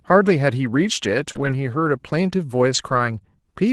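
A brief smear around 1.31 to 1.48 s is short concealed packet loss: about 40 ms never arrived in time, and the receiver bridged roughly 31 ms by extending the preceding sound. Within that stretch, 1.35 to 1.45 s turns rough and noisy, a lost packet rebuilt from error correction, with about 60 ms replayed from low-bitrate Opus copies. The same grainy roughness returns from 2.74 to 3.00 s, where about 140 ms of what sounds like several packets was rebuilt from those copies, within the 12 kHz bandwidth of the 24 kbps call.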